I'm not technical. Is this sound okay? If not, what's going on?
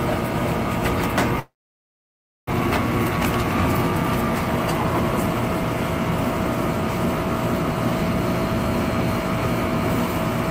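No, there are a few problems here. The whole clip has hard clipping: the signal was pushed far too loud, so the loudest moments get flattened and come out as a harsh fuzz.

From 1.39 to 2.53 s there's a long network dropout, likely caused by the connection stalling. The sound trails off into a brief fading buzz or hiss, then goes nearly silent for about a second. When it returns, that second is simply gone.

Right after, from 3.11 to 3.51 s, you'll hear a jitter buffer speed-up. The receiver caught up on the backlog by snipping tiny slivers out, about a twentieth of a second in total. That makes this stretch run roughly 11% faster while the pitch stays the same, so it sounds a bit rushed.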